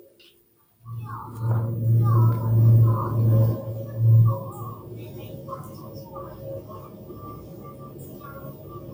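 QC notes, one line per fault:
Throughout, noise suppressor applied to sounds: a speech-tuned suppressor treats steady tones and ambience as noise, so sustains and tails sink by roughly 10 dB and pump.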